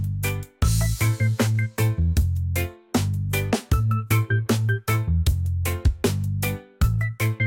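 Nothing goes wrong anywhere in the recording; there's no technical fault to point out at any moment.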